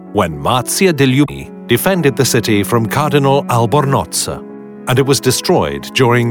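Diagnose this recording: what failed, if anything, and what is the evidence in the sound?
The failure is in the codec stage: a short run of damaged data in the compressed stream, where corrupted bytes left the decoder unable to read the affected frames properly. It lost sync there and had to hunt for the next valid frame header before normal decoding resumed. In the sound this shows as a brief disturbance from 1.24 s to 1.30 s, about 54 ms where the decoder was working from bad data.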